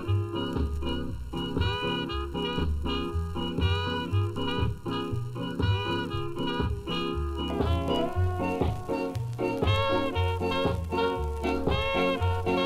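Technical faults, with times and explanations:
0.0–7.5 s, channel delay (comb filtering): one channel trails the other by a bit under a millisecond, so the mono sum cancels at regular intervals, starting at around 700 Hz and repeating evenly above that. That gives the hollow, phasey colour until it clears.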